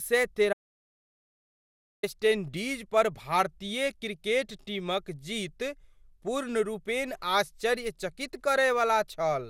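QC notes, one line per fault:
throughout, generation loss: the speech has likely been run through an MP2 codec at 128 kbit/s around ten times, each re-encode requantising on a shifted frame grid, so noise and spectral holes pile up; it sounds swirly, hollow and smeared, with blurred attacks and nothing above 17.2 kHz.
0.53–2.03 s, audio dropout to silence: the input was likely lost for about 1.5 s while silence kept being written, so the speech cuts out into total silence with no room tone, and resumes abruptly on "इंडीज़ पर भारतीय क्रिकेट"; whatever was said in the gap is gone.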